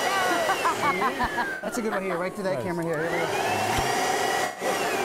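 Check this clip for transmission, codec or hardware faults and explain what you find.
Two kinds of fault are audible: two loud pops and two dropouts from AAC frame loss with concealment.

Loud pops sit at 1.24–1.27 s and 3.78–3.81 s. Each is a single sharp transient peaking about 10 dB above the sound, which continues underneath. The likely cause is a voltage step from a switch, connector, static or driver glitch, shaped into a brief pulse by the downstream circuitry.

AAC frame loss with concealment occurs at 1.50–1.68 s and 4.44–4.65 s, each time removing 128 ms of audio. In the first, the losses are spread over about 170 ms, with the longest gap around a tenth of a second. The decoder fills the gaps by reusing the last good spectrum, producing a smeared, noisy or phasey patch. The 128 ms total fits six frames of roughly 21 ms each.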